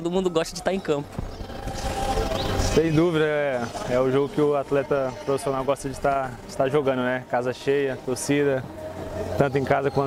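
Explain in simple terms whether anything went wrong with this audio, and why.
Yes, something did. From about 7.99 s to the end there's a fairly quiet video or display buzz, a 75 Hz hum with hiss from a nearby screen or cable.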